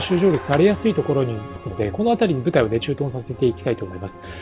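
At 1.56 s there is a skip ahead. Roughly 0.7 s of audio never reaches the output, and nothing fills the space. The material before and after the missing stretch is butted together almost directly, so the sound lurches forward with no audible pause. In effect the receiver discarded audio that was late or that overflowed its buffer while newer audio was already queued, and this shortened the playout delay by about the same 0.7 s.

Right after that, from 1.68 s to 2.9 s, there is a jitter buffer speed-up. The buffer holds more audio than its target, so the receiver trims it back by cutting out many short slices, each one or a few pitch periods long. Around 150 ms is removed in total. Playback runs at 110% with the pitch unchanged, so this stretch sounds hurried and slightly compressed in time. The band stays limited to 4 kHz throughout, which is consistent with the G.711 mu-law call path.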